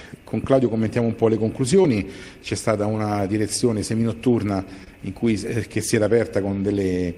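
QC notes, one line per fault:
1.82–1.85 s, 3.20–3.22 s and 4.84–4.87 s, short concealed packet loss: each spot has a brief smear or wobble rather than a clean continuation. About 20 ms, 10 ms and 20 ms of audio failed to arrive in time, and the receiver covered each hole by extending the preceding sound for roughly 16 ms, 10 ms and 23 ms before crossfading back into the real signal.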